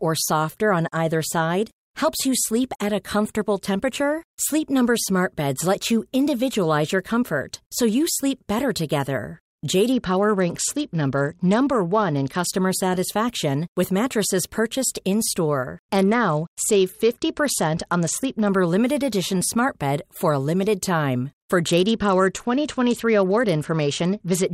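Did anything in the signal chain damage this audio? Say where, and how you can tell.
Yes, at the codec stage: a Bluetooth SBC bit pool drop. At 9.92–12.46 s, after "you sleep better together", then 15.87–18.49 s and 21.69–24.51 s, the treble dulls and grit rises. That fits a bit pool falling from 28 to 9, near 78 kbps. The upper sub-bands starve.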